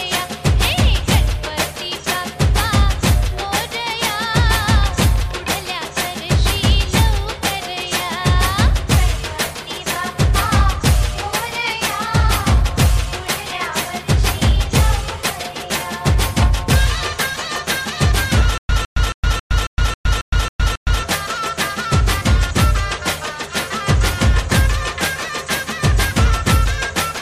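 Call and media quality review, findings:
Stutter with silent gaps, 18.58–21.03 s. The same 158 ms fragment repeats nine times, separated by 114 ms of digital silence, giving a steady 272 ms cycle. Likely a player or stream stall: each retry replays the last fragment, then the output runs empty. Audio for this span is lost.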